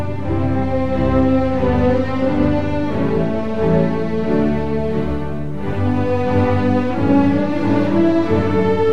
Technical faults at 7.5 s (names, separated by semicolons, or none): none